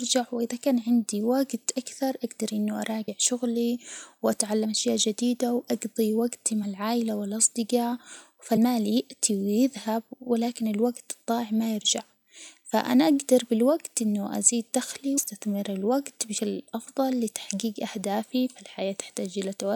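Brief smeared blips interrupt the speech at 3.07, 4.64, 6.63, 8.56, 15.17 and 16.37 s. Each time, the speech jumps forward: about 50 ms at the first two, around 70 ms at the next two, then roughly 150 and 200 ms. This is compressed frames skipped. Whole frames of the encoded stream were lost or rejected by the decoder, so playback leaps ahead by 2 to 10 frames, which fits a 26.1 ms frame length. Because adjacent frames overlap, each join smears instead of clicking.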